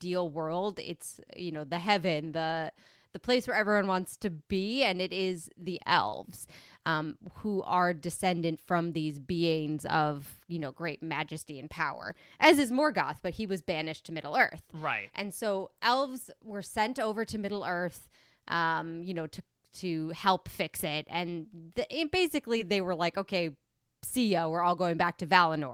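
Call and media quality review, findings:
Brief smear/wobble in speech at 6.09–6.14 s after "and it is the" and 22.58–22.61 s before "they were like okay". Short concealed packet loss, about 20 ms missing, decoder extrapolated then blended back.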